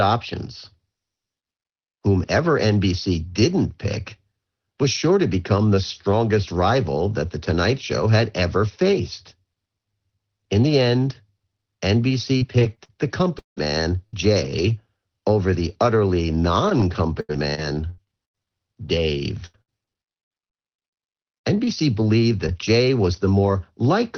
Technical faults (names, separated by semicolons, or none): repeated packet loss (robotic sound)